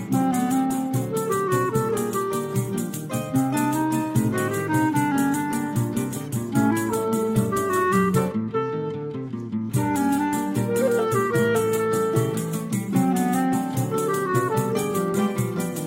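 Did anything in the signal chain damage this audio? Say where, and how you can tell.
No, nothing in the signal chain audibly damaged this audio. No stage from capture to playback leaves a mark that can be heard.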